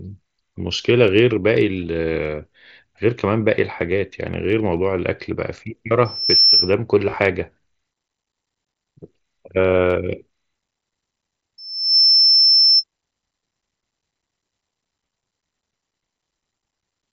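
Loudspeaker feedback squeal at 6.05 to 6.73 s: the microphone picks up its own loudspeaker, and a 5.3 kHz tone swells over roughly a third of a second to about 5 dB above the speech. Concealed Bluetooth headset packet loss at 7.10 to 7.16 s: about 37.5 ms of audio drops out across 60 ms, with the longest gap 22.5 ms. The receiver fills the gaps by repeating recent waveform, which gives a brief buzzy smear. Loudspeaker feedback squeal returns at 11.58 to 12.84 s. The same 5.3 kHz howl builds over roughly 0.4 s and peaks about 5 dB above the speech.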